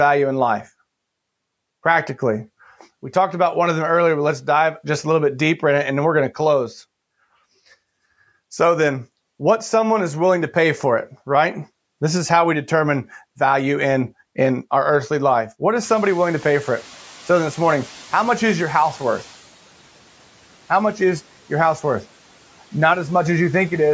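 A speech recording shows the noise suppressor catching up from 15.82 to 19.39 s. Around 16 s the room noise jumps by about 25 dB, and the suppressor's noise estimate lags, so the noise comes through with less reduction at first before sinking by about 9 dB over roughly 3.6 s. Unlike a gate's abrupt switching or a genuine change in the room, the background fades smoothly while its source stays constant. The band stops at 8 kHz, as expected through call microphone processing.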